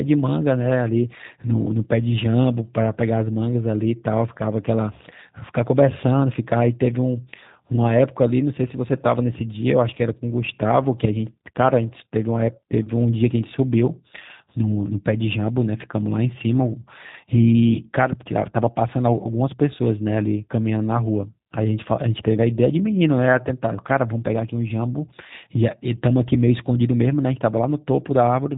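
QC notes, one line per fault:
throughout G.729A codec: the speech has a rough, synthetic grain, and it is plainly audible. Nothing reaches above 4 kHz, so sibilants lose their edge, a character that fits G.729A at 8 kbit/s. A plain low-pass filter would only dull the sound, but here the voice is rebuilt from a vocal tract filter, a pitch predictor and sparse pulses in 10 ms frames, and that rebuilding produces the artificial texture.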